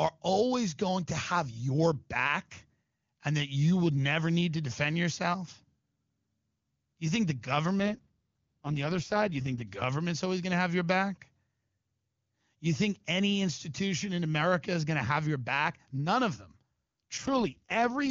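From 7.79 to 9.62 s, after "think the" and before "government's always going to", and again from 17.17 to 18.10 s, an AMR rate drop makes the speech rough and synthetic, which fits the codec falling from its top mode to about 6.6 kbit/s. Unlike a dropout or band narrowing, there is no gap and no loss of treble.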